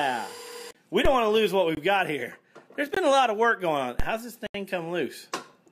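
The audio drops out to blocks of digital silence four times. Three gaps of about 21 ms sit at 0.73–0.75 s, 1.75–1.77 s and 2.94–2.97 s. Their length fits a 1024-sample buffer that was not filled in time. A longer 79 ms hole follows at 4.47–4.54 s. Each gap starts and ends abruptly, with no fade. Two DC steps also occur, at 1.05 s and 4.00 s. The zero line jumps suddenly and then drifts back, like a 5 Hz high-pass settling. Each step gives a low thump while the sound carries on underneath.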